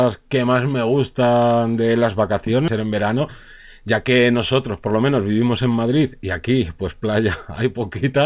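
Right after "me gustan de las", at 2.68 to 2.70 s, there's a skip ahead. Roughly 0.7 s of speech got dropped and playback jumps straight to later audio with no gap. Then come two jitter buffer speed-ups, 2.80 to 3.21 s at 108% and 3.80 to 5.18 s at 107%, ending just before "vivimos en". The buffer was trimming short pitch-period chunks, only a few tens of milliseconds in the first and around a tenth of a second in the second, so the speech sounds a bit rushed at unchanged pitch. Underneath it all, the band stops at 4 kHz, which fits G.711 A-law at 64 kbps.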